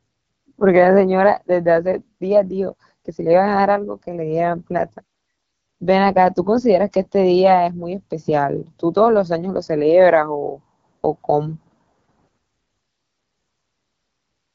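Throughout the speech the sound is rough and raspy, with a grainy, buzzy edge. This is the AMR wideband (HD Voice) codec running at 8.85 kbit/s, one of its two lowest rates, where the pulse-driven vocal tract model can't capture enough detail.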